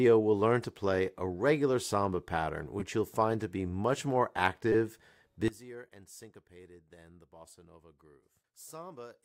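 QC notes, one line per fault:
2.80 and 4.73 to 4.75, repeated buffer: Each is a brief buzzy click rather than a stutter. At 2.80 a tiny slice of sound is played four times in a row, and at 4.73 a slice is played five times, with a hard edge at every join. Each repeated slice is about 5 ms long, which fits a 5 ms playback buffer. When fresh audio missed its deadline, the device replayed the last buffer. The repeats are so short and fast that they fuse into a buzz, and almost nothing is skipped afterwards.
5.48 to 9.24, one channel inverted: From 5.48 to the end, the sound collapses to a faint remnant about 21 dB quieter. What both channels shared is nearly gone, leaving a faint trace. One stereo channel's polarity was likely flipped, so when the channels are summed to mono, everything common to both cancels. Only the small difference between left and right survives, which is why it sounds so weak.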